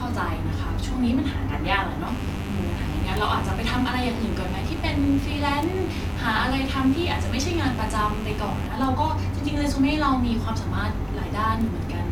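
A speech recording with two separate problems. From 2.07 s to 8.67 s there's a mains buzz, a raspy 50 Hz hum with harmonics running well up into the kilohertz range, sitting roughly 15 dB under the speech. That rasp points to sharp switching spikes, twice per mains cycle, getting in through a dimmer, a rectifier or a missing shield. Separately, you'll catch four bit error spikes, at 3.17 s, 5.63 s, 8.84 s and 11.61 s. Each is one hard, broadband tick that has nothing to do with the speech around it, which fits a single sample jumping by a power of two after a flipped bit in memory or on a digital link.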